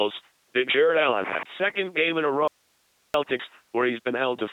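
From start to finish, the speech has passed through an LPC-10 vocoder, and the damage is heavy. The voice comes out buzzing and robotic. Each instant is rebuilt from a simple all-pole filter driven by either a pulse train or noise, never a mix. Where that choice goes wrong, buzz or hiss lands in the wrong place. Nothing reaches above 3.9 kHz. The coarse, mechanical texture fits the 2.4 kbit/s rate of this military coder.

At 2.48 s there is an audio dropout to a faint residue. The speech cuts out abruptly and returns at 3.14 s, about 0.67 s later. The gap is not silent. It holds only hiss, roughly 40 dB below the speech. That tells us the path after the break stayed live while the wanted signal vanished. The most likely cause is a brief loss upstream. The edges are sharp, unlike a natural pause or a fade.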